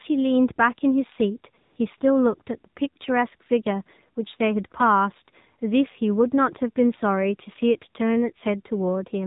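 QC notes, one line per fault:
Throughout: AMR narrowband mobile codec. The speech has a hard ceiling at 4 kHz because the codec works at 8 kHz sampling, so sibilants and airy detail are missing. The damage is plainly audible: a buzzy, synthetic edge where the codec rebuilds the voice from a vocal-tract model fed by a handful of pulses per subframe. The coarseness fits a low mode of about 7.4 kbps, where few bits are left for the excitation.
1.62–1.76 s and 1.98–2.00 s: AMR comfort noise. In two short gaps, about 140 ms and then 20 ms, the real background drops out and a smooth, steady hiss takes its place, switching in and out abruptly. The phone treated these moments as silence and stopped sending speech frames, and the receiver filled the gaps with synthetic noise shaped only from a rough level and spectrum, so any real texture or quiet tail in those spots is gone.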